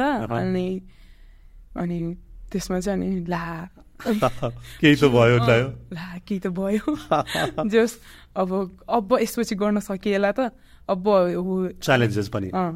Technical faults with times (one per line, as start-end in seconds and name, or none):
none